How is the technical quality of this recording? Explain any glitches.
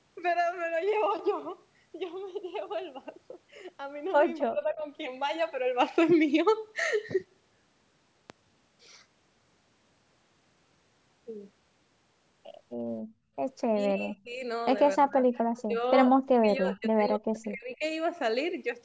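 The recording has a handful of clear glitches, most of them bunched into the last third of the clip. This is speech that's been through call-style microphone processing, so it's band-limited with nothing above 8 kHz.

Speech suppressed in double talk, at 4.47–4.83 s, 13.68–14.41 s, 14.97–15.26 s, 15.65–15.82 s and 16.25–17.83 s: the voice suddenly dips or chops out in pieces. The first and last are the deepest, dropping by something like 40 dB, and the last one drags on for about a second and a half. The others are shallower. This is likely an echo canceller hearing both ends talking at once, failing to tell the near voice from the loudspeaker echo, and ducking everything.

Loud pop, at 8.30–8.32 s: one sharp pop sits on top of the speech, roughly 10 dB above it, while the talking carries on underneath. That kind of click likely comes from a sudden voltage step or spike, such as a plug, a switch, static or a driver hiccup, which the following circuitry shapes into a short, punchy transient.

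Background gated by the echo canceller, at 13.03–13.30 s: the room tone behind the voice drops by about 15 dB for roughly a third of a second, then comes back. The canceller clamps the microphone down hard while the far-end loudspeaker is active and lets go afterward, so you hear the ambience briefly vanish.

Echo leak, at 15.56–15.62 s: a faint scrap of delayed voice slips through, trailing by about 261 ms and sitting around 25 dB below the main speech. It's a brief ghost rather than a full repeat. It's likely loudspeaker pickup at one end that the echo canceller didn't fully scrub, which then got sent back down the line.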